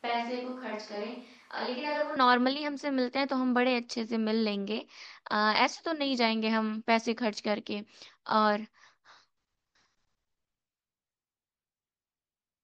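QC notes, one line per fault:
0.00–2.16 s, switch to a distant microphone: the clip opens already on a hollow, roomy pickup, with thinner low end, a level about 5 dB below what follows, and room noise sitting roughly 35 dB under the speech. At 2.16 s the sound snaps abruptly to a close, full-bodied pickup. This points to the close microphone's signal being likely missing for the first two seconds, leaving a far-off microphone that hears more room reflection and less of the source's bass.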